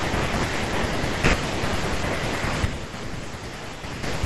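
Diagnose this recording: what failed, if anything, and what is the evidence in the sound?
A channel likely dropped out in the analogue wiring or a connector. From 2.65 s to 4.03 s the speech falls abruptly by about 6 dB and then recovers, because only the surviving channel reaches the mono sum. On the waveform the envelope steps down and back; the spectrogram dims uniformly across all frequencies.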